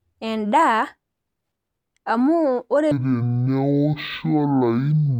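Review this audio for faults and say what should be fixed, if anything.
Stereo read as mono from 2.91 s to 5.20 s: interleaved left and right samples are taken as one channel, so each frame becomes two consecutive samples. The speech plays at half speed and drops a full octave (12 semitones). To prevent it, read the file's channel count from its header and de-interleave stereo data before playback.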